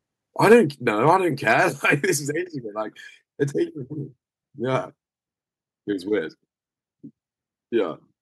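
From 0.43 to 0.56 s the loudest speech peaks flatten into a harsh, crackling edge. This is likely microphone overload: the input runs about 4 dB past the converter's ceiling, so a noticeable share of waveform tops are sliced off. At 0.53 s, voice and background drop together by about 2 dB in a single step, likely the microphone volume stepped down by the call software in response to that distortion. Milder crackle returns from 1.07 to 1.16 s, about 1 dB over, likely overload again, and from 1.47 to 1.53 s, about 3 dB over, likely the same cause, each time clipping only a small fraction of samples. At 1.53 s the level falls by about 3 dB in one step, likely a second microphone volume step-down following that peak.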